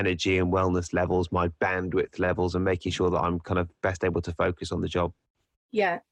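No technical faults can be heard anywhere in the recording, and the signal holds steady throughout.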